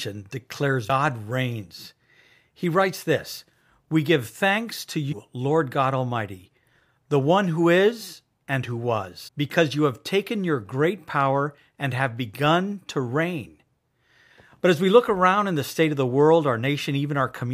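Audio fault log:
0.88 s, 5.11–5.13 s (after "give thanks to"), 9.27–9.29 s (between "who is and who" and "because you have taken"): damaged data in a compressed stream. Corrupted bytes make the decoder misread frames and lose sync, giving brief glitches that show as short vertical broadband smears on a spectrogram and abrupt waveform discontinuities.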